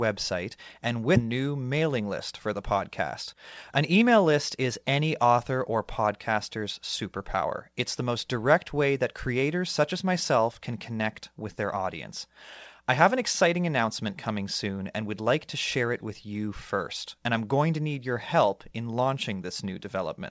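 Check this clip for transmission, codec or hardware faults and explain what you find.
Two transmission faults are audible in this speech clip. The G.722 call path cuts everything above 8 kHz.

Skip ahead at 1.16 to 1.18 s. Roughly a second of speech was dropped. Playback jumps forward with no gap, and the two sides join almost directly.

Jitter buffer speed-up from 3.02 to 5.31 s, between "list for the" and "or podcaster's superpower". The buffer held too much audio. Short pitch-period pieces were cut repeatedly, about 200 ms in total. Speech runs at 108% speed with unchanged pitch and sounds hurried.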